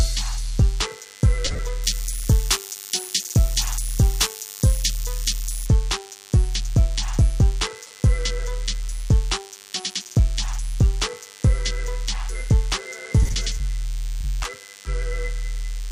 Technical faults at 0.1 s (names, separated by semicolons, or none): DECT cordless phone buzz